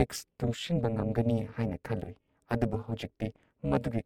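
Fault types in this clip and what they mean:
Overlap-add ripple: The speech was split into windowed frames and rejoined with overlaps that don't sum to a steady gain. The level dips by about 60 dB once per frame, roughly 300 times a second, throughout. It sounds like a harsh, metallic buzz with extra tones around the voice.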